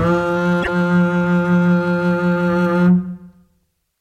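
A short music clip with damaged data in a compressed stream from about 0.59 to 0.69 s. Corrupted bytes leave the decoder misreading frames and hunting for sync, producing a brief glitch. A spectrogram shows a disruption over that stretch, and the waveform breaks abruptly.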